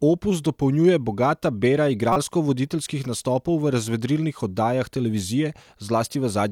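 Speech, with one corrupt frame decoded from 2.13 to 2.16 s, between "opus dopolnjuje bogata bera" and "voditeljskih nastopov v razvedrilnih". It sounds like a brief chirpy burst, peaking around -10 dBFS. Flipped bits made the decoder misplace energy. The length fits about two damaged frames.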